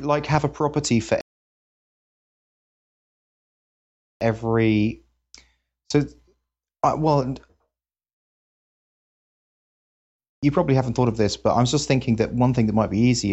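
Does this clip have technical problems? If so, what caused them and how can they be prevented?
Yes. Two rebuffering stalls occur, from 1.21 to 4.21 s after "have a property for" (adding 3.0 s) and from 8.23 to 10.16 s before "you probably haven't thought" (adding 1.9 s). Each time, playback ran out of data, froze, then resumed exactly where it stopped. A waveform shows these as flat, silent gaps, and a spectrogram as blank vertical bands. A larger playback buffer or adaptive bitrate switching prevents these stalls.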